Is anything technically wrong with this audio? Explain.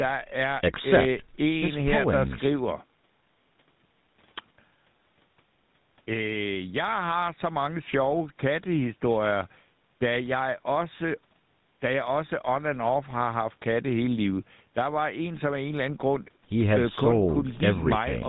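Yes. The speech passes through a GSM full-rate codec throughout. This phone codec models the vocal tract and drives it with coarse, regularly spaced pulses. Nothing above 4 kHz survives. The result is a plainly audible buzzy, gravelly roughness, consistent with GSM's 13 kbps rate.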